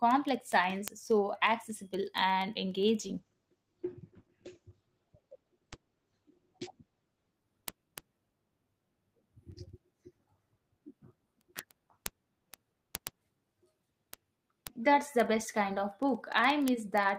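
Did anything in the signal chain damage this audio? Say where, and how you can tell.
Yes, two stages left marks. The first is clocking at a digital interface, showing as word clock ticks. From 0.11 s to the end, sharp ticks of uneven strength repeat at a steady interval of roughly 70 ms. That regular spacing points to a receiver running on its own clock, not locked to the sender, with a mismatch of roughly 400 ppm. Each time the two clocks slip past each other, one sample is dropped or repeated and the neighbouring samples are misread, producing a tick.

The second is in call processing at the codec, as a call bitrate drop. From 3.01 s to 8.13 s the speech turns rough and muffled, and the top end collapses from about 20 kHz down to an 8 kHz cutoff. The worst stretch lasts about 4.06 s before the detail returns. That fits the bandwidth estimate falling and the encoder being pushed from around 32 kbps to around 12 kbps, coding more coarsely and discarding the high frequencies until the rate recovered.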